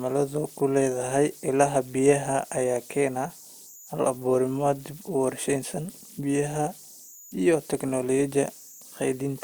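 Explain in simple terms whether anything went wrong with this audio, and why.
Converter idle tones run through the whole recording, from start to finish. They sound like a thin whistle at around 7 kHz, clearest in the pauses between speech, with a grainy hiss under the quieter parts. The recording chip turns sound into digital numbers, and here it did so without the small random noise that keeps it honest. When the sound was quiet, it fell into a repeating pattern, and that pattern produced the whistle.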